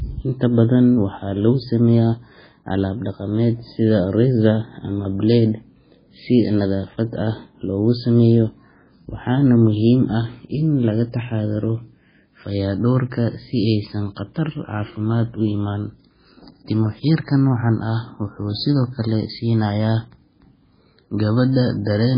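Throughout, likely MP3 compression: the encoder cuts the speech off above 5 kHz, and weak frequency lines flicker between frames, sounding heavily watery and swirly.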